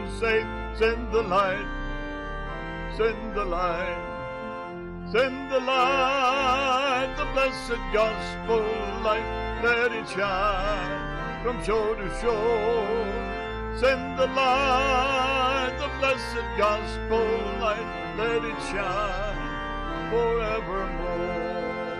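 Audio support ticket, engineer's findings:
No technical faults found on listening: the signal path shows no audible dropouts, distortion or timing problems anywhere in the clip.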